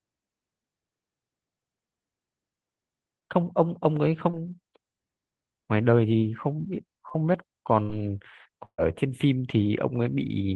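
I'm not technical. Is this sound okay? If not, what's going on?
No. This is a speech recording that has been through a call connection, and small pieces of it never arrived on time.

At about 3.19, 4.31 and 7.09 seconds there is short concealed packet loss. Each time, roughly 20 milliseconds of the voice went missing, and the receiving phone or app covered the hole by briefly stretching out the sound just before it. You hear a tiny smear or wobble, and a very short sound at that spot can drop out.

Two longer gaps are bursts of packet loss. From 7.82 to 7.91 seconds about 60 milliseconds of speech is lost. The receiver holds the last sound for a moment instead, which comes across as a brief buzz or hiss. From 8.65 to 8.80 seconds about 140 milliseconds is lost. The stand-in sound fades out, leaving roughly 80 milliseconds of silence, and the speech then picks up with that piece missing.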